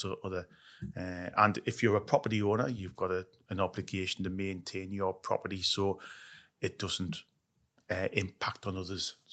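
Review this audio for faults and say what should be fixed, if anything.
Nothing stood out on listening, so there is nothing here that needs fixing.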